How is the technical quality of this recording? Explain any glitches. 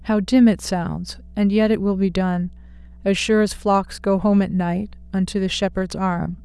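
There's one problem, and it runs the whole way through: mains hum, a steady 60 Hz drone sitting roughly 25 dB under the speech, from a ground loop or nearby transformer bleeding in power.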